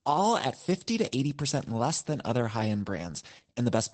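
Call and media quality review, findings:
Opus voice compression, throughout. Symptom: plainly audible codec damage on the speech, with nothing above 8.7 kHz (wideband). Probable component: the Opus encoder in SILK mode, which fits roughly 12 kbps with 20 ms frames. Mechanism: linear-prediction coding with coarsely quantised excitation, plus band-limiting at that rate.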